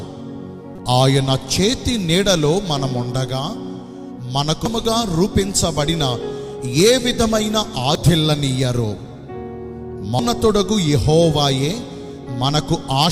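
Right at the start there's a short glitch from about 0.75 to 0.79 s, then three quicker blips at 4.66, 7.95 and 10.19 s. They all sound like damaged data in a compressed stream: some bytes in the encoded file went bad, so the decoder misread those frames, lost sync for a moment and hunted for the next clean frame header. What you hear is a brief chirp, squawk, click or short hole.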